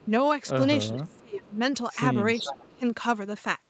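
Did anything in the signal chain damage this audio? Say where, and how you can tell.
Yes. There is an echo leak in call processing. A copy delayed 0.44 s appears at 0.0–0.08, 0.93–1.19, 1.5–1.55 and 2.35–2.76 s, likely uncancelled loudspeaker pickup.

Speech is suppressed in double talk at the same stage. Level dips by up to about 20 dB at 0.98–1.57 and 2.4–2.82 s, likely the canceller ducking overlapping talk.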